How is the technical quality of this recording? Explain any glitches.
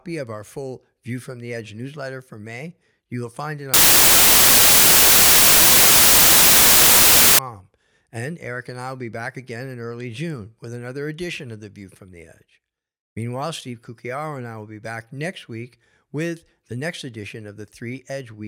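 The recording has one serious glitch. From 3.74 to 7.39 s, right after "you will find it", the speech turns into loud, harsh broadband noise, close to white on the louder sounds. These are samples built from the wrong bytes: the bytes are misassembled, so the fast-changing low bits dominate each value.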